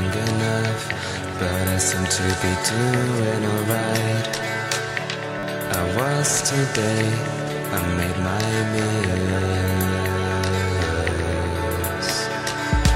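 At 5.39 to 5.43 s, a repeated buffer: one 10 ms piece plays four extra times with hard joins, giving a brief buzz rather than a gap or dropout.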